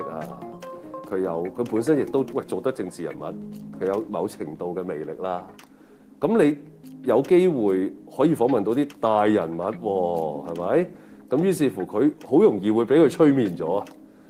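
No technical faults can be heard in this audio. There is nothing to place on a timeline.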